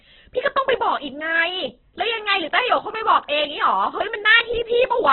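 From start to finish the speech carries heavy damage that points to Opus compression as the likely cause, at a rate as low as about 8 kbps. The encoder has kept band energies but filled them coarsely, so the sound is grainy, rough and noisy. It is also dulled and narrow. On a spectrogram, everything stops at a hard ceiling near 4.1 kHz, with smeared, speckled texture below it in place of clean harmonics.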